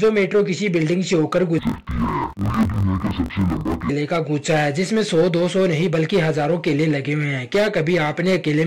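Interleaved audio read as planar runs from 1.59 to 3.90 s: each 21.77 ms block of alternating left and right samples is split into halves played side by side at half speed, so the sound drops an octave, doubles and chops at 45.9 Hz.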